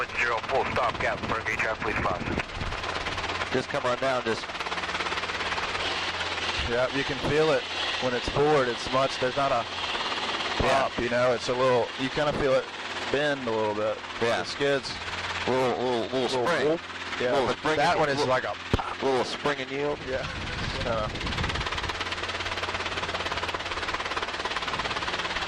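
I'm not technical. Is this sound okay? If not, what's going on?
Yes, the sound has no technical faults you need to worry about.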